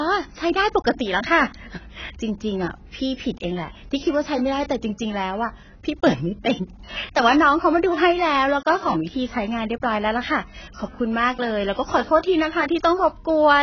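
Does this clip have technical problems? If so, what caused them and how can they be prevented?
Yes. AAC compression, likely at a low bitrate near 16 kbps, dulls the speech throughout. Nothing passes above 6.8 kHz, and sibilants warble and smear. Encode at a higher bitrate to prevent it.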